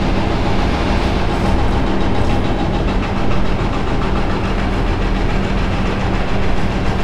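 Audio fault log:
No faults heard.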